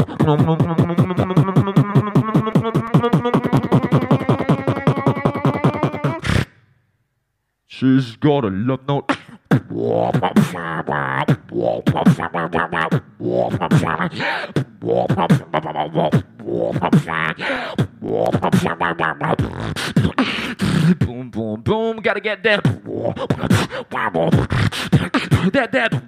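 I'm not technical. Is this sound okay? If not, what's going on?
No. CD scratch ticks occur from 2.0 to 4.3 s and 17.4 to 18.8 s. These are tiny, evenly spaced clicks, about six a second, one per disc turn. Vinyl crackle, by contrast, is random.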